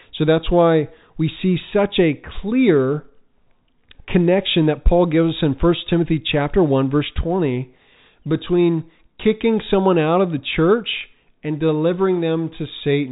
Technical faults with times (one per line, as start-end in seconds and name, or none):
none